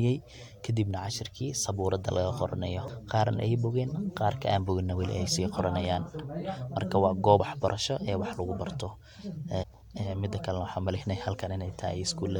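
At 2.88–2.90 s after "cashirkii sabuurada laga qoronayo", at 7.39 s after "marka waa", and at 9.62–9.64 s, damaged data in the compressed stream makes the decoder misread frames and lose sync. Each event is brief.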